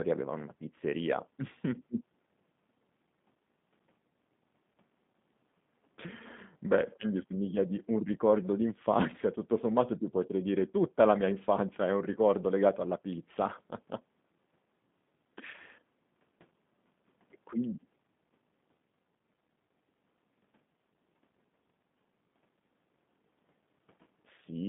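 From start to finish the speech sounds slightly rough and synthetic, confined to a 150 Hz to 3.6 kHz line band with nothing above 3.8 kHz. That is plainly audible G.729 codec damage, rebuilding each frame from a vocal-tract filter, pitch predictor and sparse pulses, consistent with an 8 kbit/s stream.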